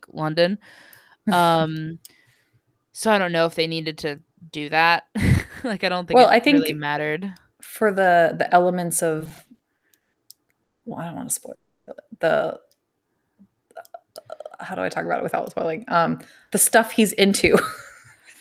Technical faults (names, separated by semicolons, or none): repeated stalls (stutter); call audio freeze; jitter buffer slow-down; jitter buffer speed-up